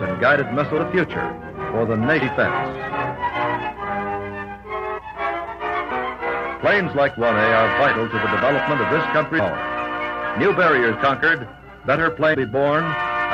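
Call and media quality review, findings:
Compressed frames skipped at 0.77, 2.21, 4.97, 5.90, 9.38 and 12.33 s. Audio jumps ahead a few tenths of a second each time. Decoder dropping missing or damaged frames; frames of roughly 23 ms.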